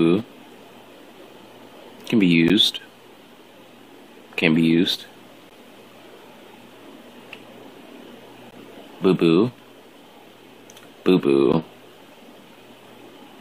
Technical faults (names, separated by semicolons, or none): gap between chunks